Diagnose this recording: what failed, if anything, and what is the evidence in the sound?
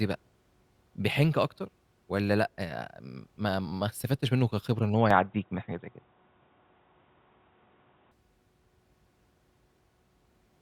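The input appears to have switched to a poorer device at the capture stage, from 5.11 s to 8.11 s. The speech turns dull and boxy with no gap at the switch, then clears again. A spectrogram would show energy abruptly capped at 3.8 kHz across that span. The waveform would show a level step of around 5 dB and a faint new noise floor, roughly 50 dB down. This is likely a change to a narrower-band microphone or headset profile.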